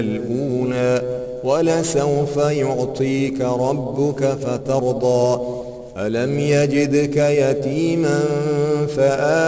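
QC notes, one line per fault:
Throughout: aliasing. Everything above 8 kHz has folded back down into the band as stray, unrelated tones, sitting roughly 25 dB under the signal. That fits a drop to a 16 kHz rate with no anti-alias filter first, so the top end sounds gritty and metallic.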